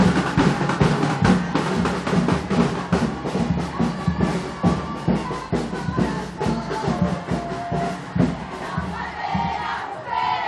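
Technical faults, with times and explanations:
Nothing technical stands out here: no faults to report at any point in the clip.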